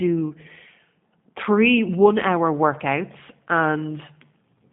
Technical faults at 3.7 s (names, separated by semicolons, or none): G.729 codec